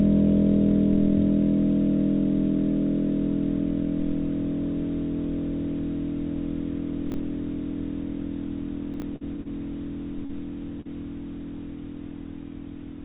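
At 7.10 to 7.14 s, chunks out of order: one 20 ms chunk was written a chunk late, so it plays after its successor. At 8.94 to 9.02 s the same fault recurs with a chunk three places late. Nothing is lost, but each spot jumbles briefly.

At 9.16 to 9.24 s, a burst of packet loss leaves the receiver without about 40 ms of audio. It extends the last sound for roughly 47 ms while fading it, heard as a held, decaying buzz or hiss, then resumes slightly further on with that stretch skipped.

At 9.42 to 9.48 s, a short stall from a late packet drains the jitter buffer. The receiver holds the current sound about 36 ms until the packet lands, then carries on from the same point. Nothing goes missing, but the sound lingers with a faint buzz or dip.

At 10.25 to 10.32 s and 10.81 to 10.88 s, short concealed packet loss drops about 40 ms each time. The receiver patches each hole with roughly 38 to 39 ms of continued sound before blending back, giving a quick smear or wobble. 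These events sit within the G.711 call path's band-limited sound, with nothing above 4 kHz.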